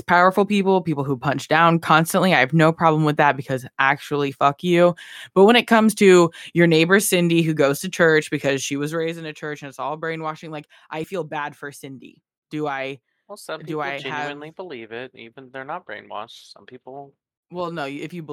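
No technical faults turn up anywhere in this speech recording. The level is steady, and no fader-style changes to how loud it sounds can be heard.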